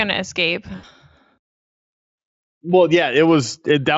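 Speech with VoIP packet loss concealed by the speech codec from 0.75 to 0.84 s, after "to escape": 80 ms, fitting four lost 20 ms frames, turns into a buzzy tone or coloured noise that fades, stretched from the last pitch. A spectrogram shows the last spectrum frozen and dimming; the waveform shrinks.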